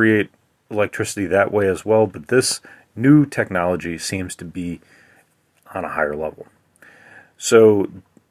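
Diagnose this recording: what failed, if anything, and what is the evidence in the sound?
Nothing in the recording points to a failure at any stage of the chain. No interruptions, level jumps or other anomalies turn up in the audio at any point.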